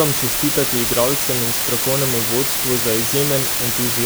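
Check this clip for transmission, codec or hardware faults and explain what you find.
One fault runs through the whole speech clip: low bit depth with dither. Only 3 bits are used, and dither turns the rounding error into steady, even hiss about as loud as the speech, with no distortion.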